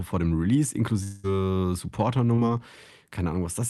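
Speech over an Opus call path cut off above about 12 kHz, with two faults. From 1.03 to 1.26 s the last sound is stretched into a fading buzz or hiss lasting about 200 ms and never drops to silence, and speech resumes with that stretch missing, likely a long network dropout. It differs from a brief glitch in length and in the audible smeared tail. From 2.36 to 2.39 s there is a short concealed packet loss: about 20 ms never arrived in time and was filled by extending the preceding sound before blending back, heard as a quick smear or wobble rather than a sustained fade.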